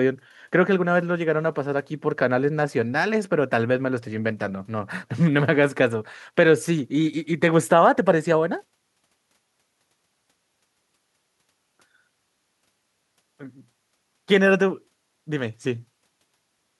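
No technical faults can be heard anywhere in the recording.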